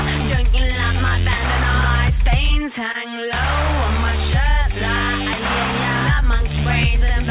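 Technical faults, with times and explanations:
2.92 to 2.96 s, short concealed packet loss: a slice of the call arrived too late to decode, so the receiver covered the gap by extending the sound just before it, about 20 ms missing and roughly 23 ms filled, then cross-faded back into the real signal. That patch is why you hear a quick smear or small wobble there rather than a clean hole, all within the call's narrowband sound, which tops out at 4 kHz and fits a G.711-style codec.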